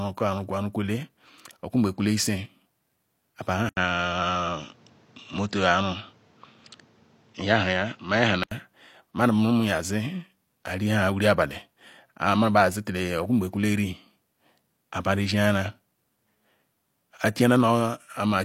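At 3.69 s the speech loses its top end and turns duller and boxier until 8.51 s, when the fuller sound returns. An input switched to a poorer device is the likely cause, a narrower-band microphone taking over mid-recording. A spectrogram shows energy cut off sharply at 7.6 kHz across that span, with a new noise floor roughly 35 dB under the speech. The waveform shows an 80 ms gap at the switch, while the overall level stays about the same.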